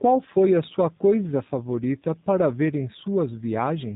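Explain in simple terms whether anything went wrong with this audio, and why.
Yes, something went wrong. From start to finish the speech sounds thin and boxed-in, as if heard down an old phone line, with a slightly rough, buzzy, artificial edge. That comes from the G.729 codec, a low-rate internet-calling format. Rather than keeping the actual sound, it rebuilds the voice from a simple model of the throat and its pitch, and drops everything above about 3.8 kHz, so brightness and natural texture are lost.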